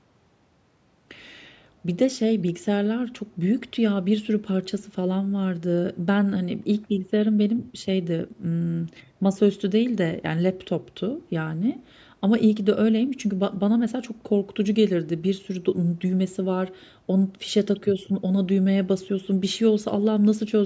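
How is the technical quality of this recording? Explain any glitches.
No glitches can be heard in this speech recording. It has the sound of a call microphone path working as intended, with the lowest bass rolled off and nothing above 8 kHz.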